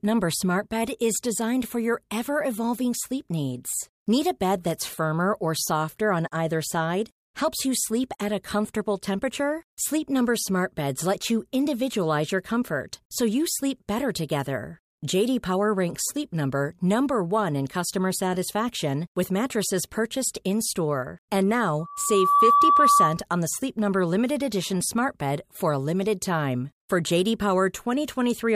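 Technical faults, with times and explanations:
21.79–23.22 s, loudspeaker feedback squeal: a 1.2 kHz tone swells over roughly half a second to around 10 dB above the speech, ending just before "on the". The microphone picks up its own loudspeaker, and at 1.2 kHz loop gain exceeds one, so the tone reinforces itself.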